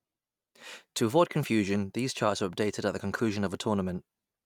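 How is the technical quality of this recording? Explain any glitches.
Nothing here needs explaining, since the speech comes through without a single glitch anywhere in the recording.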